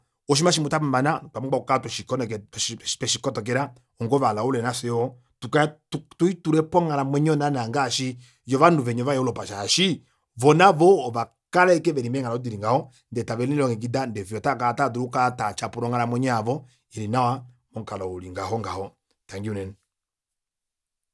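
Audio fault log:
No technical faults are audible anywhere in the speech recording.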